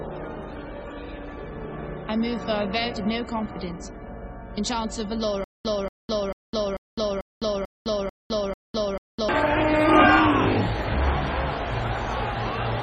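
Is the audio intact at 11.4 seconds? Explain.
Yes, the audio at 11.4 seconds is intact, with no dropout, click or other fault at that point.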